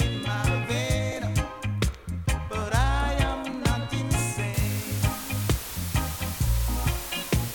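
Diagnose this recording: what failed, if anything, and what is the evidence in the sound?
The failure is at sample-format conversion: from 4.54 s to the end at 7.54 s, the audio drops to low bit depth with dither. A constant, even hiss appears, loud, around 10 dB below the signal, with no harsh distortion, which fits requantisation to about 5 bits. Dither randomises the rounding error, so it becomes steady white noise. On a spectrogram, a flat noise floor suddenly fills every frequency at 4.54 s. On the waveform, the trace thickens into a fuzzy band.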